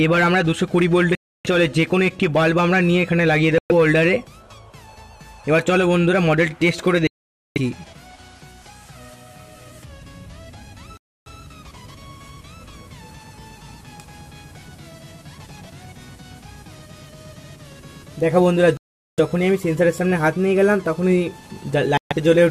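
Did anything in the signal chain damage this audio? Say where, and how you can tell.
Yes, at the wireless playback stage. Sound cuts to silence six times, at 1.15, 3.58, 7.07, 10.97, 18.77 and 21.97 s, for 0.12 to 0.49 s, then carries on. This is likely a Bluetooth stall: delayed packets drained the headphone buffer until resends arrived.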